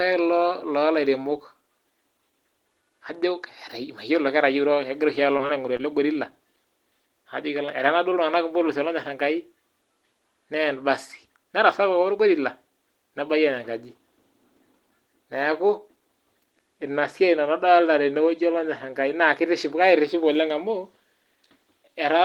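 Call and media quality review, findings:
Short concealed packet loss, 5.37–5.41 s, 5.47–5.51 s, 5.77–5.82 s: brief smears where the receiver's jitter buffer and decoder extended the preceding sound over each gap of about 20 ms, consistent with single lost 20 ms packets. The third event is stretched slightly longer.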